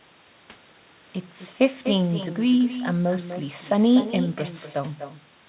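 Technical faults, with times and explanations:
Throughout, echo with no canceller: every phrase returns about a third of a second later, about 12 dB quieter, picked up from the far end's loudspeaker and sent back uncancelled.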